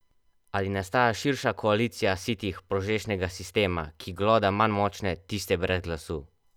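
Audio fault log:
No audible faults found.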